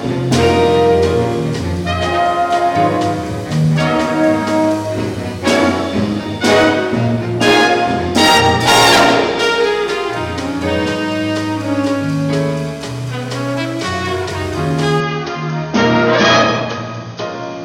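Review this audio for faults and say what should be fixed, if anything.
From 15.00 s to the end, everything above 6.5 kHz vanishes and a new, faint noise floor appears, likely an input switched to a poorer device. Unlike a codec bandwidth drop, the background changes too. Locking the recording input to one device would prevent it.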